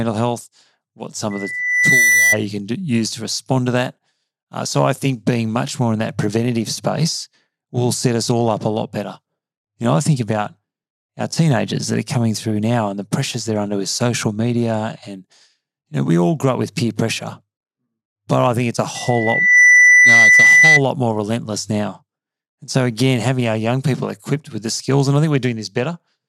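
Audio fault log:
1.30–2.37 s and 18.95–20.81 s, loudspeaker feedback squeal: a pure 2 kHz tone swells up over a little under a second into a piercing whistle. The first sits somewhat above the surrounding sound, and the second, longer one is markedly louder. A microphone is hearing the loudspeaker it drives, and at 2 kHz the loop gain tops unity, so that frequency keeps feeding on itself until the loop is broken.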